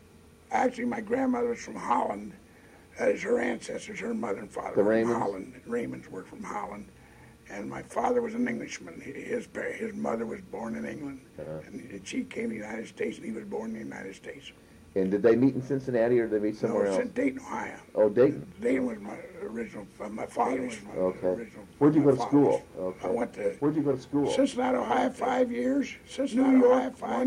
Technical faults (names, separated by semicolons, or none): doubled audio track